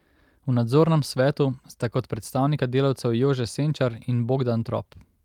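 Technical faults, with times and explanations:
No technical faults heard.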